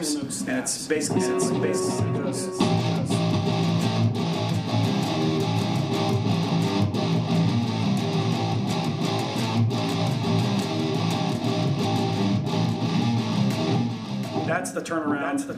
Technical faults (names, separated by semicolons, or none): doubled audio track